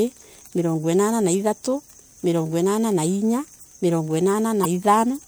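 Damaged data in a compressed stream appears from 4.61 to 4.66 s, near the end of the speech. A short stretch of the encoded bitstream is corrupt, so the decoder cannot read those frames correctly, loses its place and has to hunt for the next valid frame header before normal decoding resumes. The result is a brief chirp, squawk, click or short hole lasting roughly 40 ms that cuts across the speech.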